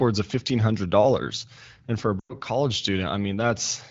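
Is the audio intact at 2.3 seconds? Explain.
No. From 2.20 to 2.34 s there are lost AMR speech frames, which fits a run of five 20 ms frames. The decoder repeats the last good pitch and vocal tract settings at falling gain. The speech drops to near silence within two frames.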